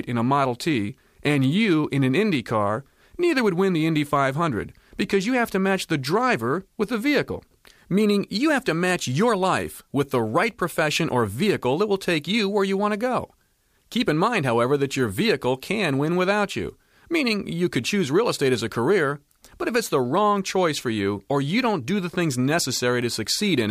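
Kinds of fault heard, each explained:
No technical faults are audible anywhere in this audio.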